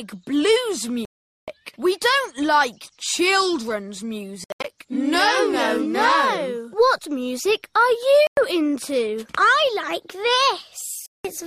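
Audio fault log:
1.05–1.48 s, Bluetooth dropout: the sound cuts to silence for about 0.43 s, then resumes further on, as if it had kept playing; likely packets missing the headphones' deadline.
4.44–4.65 s, Bluetooth dropout: a stutter of short silences scattered over about 0.2 s, longest about 81 ms, totalling about 0.16 s; likely intermittent lost packets on the wireless link.
8.27–8.37 s, Bluetooth dropout: a brief hole of about 0.1 s, playback picking up later in the audio; likely late packets discarded by the receiver.
11.06–11.25 s, Bluetooth dropout: silence of about 0.18 s, then the sound returns having skipped ahead; likely packets that failed to arrive in time and were dropped.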